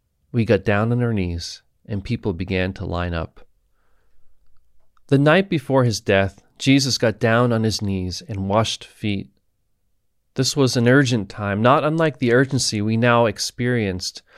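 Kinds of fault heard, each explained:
No kinds of fault are heard in this clip.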